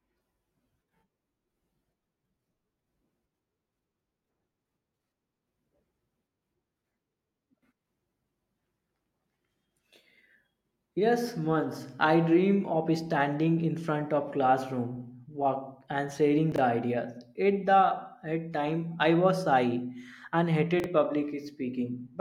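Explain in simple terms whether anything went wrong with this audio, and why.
Two brief jumbled moments stand out in this speech, at 16.52 to 16.58 seconds and again at 20.80 to 20.86 seconds, each a quick garbled flicker. Both are chunks out of order: a 20-millisecond piece of sound arrived late and played two pieces after where it belonged. Nothing is missing, but the shuffled order creates sudden joins between pieces that don't fit together.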